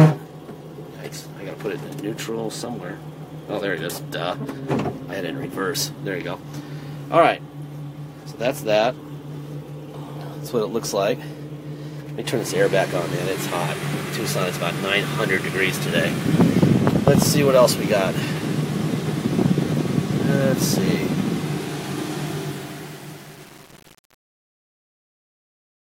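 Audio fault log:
22.26 to 25.88 s, truncation distortion on a fade. As the fade-out starts from around 22.3 s, the level stage keeps too few bits and adds no dither, which fits about 7-bit resolution. The waveform collapses into coarse steps, so the quiet tail turns gritty.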